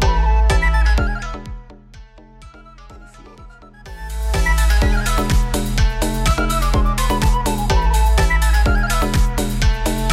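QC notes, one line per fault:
0.93–1.83 s and 3.76–4.46 s, zipper noise: the level drops by roughly 25 dB, then rises back, in 1 dB steps around 40 times a second. Each unsmoothed step clicks, so the ticking lasts only while the level moves, unlike a steady click fault.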